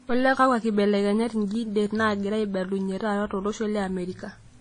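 Across the whole speech clip, nothing is present above 10 kHz, and two distinct sets of coding artefacts sit on top of each other. This is likely transcoding between lossy codecs, which fits a Vorbis encode near 35 kbit/s re-encoded as WMA near 32 kbit/s, each adding its own artefacts.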